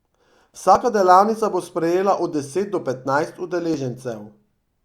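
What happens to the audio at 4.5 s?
Nothing goes wrong at 4.5 s; the speech carries on intact through that moment, with no dropout, click or distortion.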